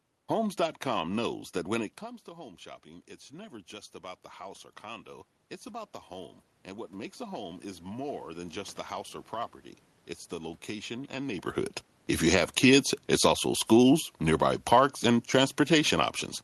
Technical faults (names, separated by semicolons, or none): automatic gain rising; automatic gain falling